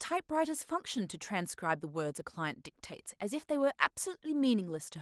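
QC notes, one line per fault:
No faults to note for this speech clip.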